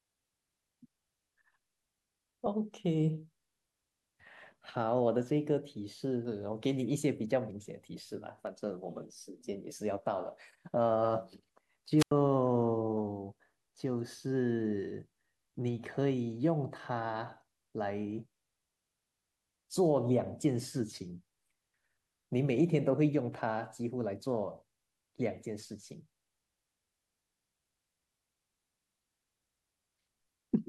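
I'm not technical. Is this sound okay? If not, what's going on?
No. At 8.47 s there is a single sharp click, likely from dropped samples: a tiny fraction of a millisecond of audio went missing, so the waveform jumps abruptly.

From 11.98 to 12.11 s there is a wireless microphone squelch dropout. The radio signal weakened, and the receiver muted its output for about 90 ms, leaving a brief gap of near silence.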